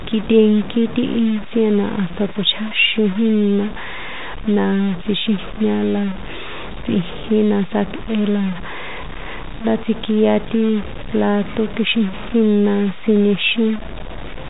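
Throughout the speech, a coarse, grainy distortion tracks every syllable, sitting only around 15 dB below the voice, and quiet tails sputter or drop out. This is likely low bit depth without dither, consistent with roughly 5-bit truncation. The waveform shows visible stair-steps, and the spectrogram shows broadband noise that rises and falls with the signal, capped at 3.8 kHz by the telephone path.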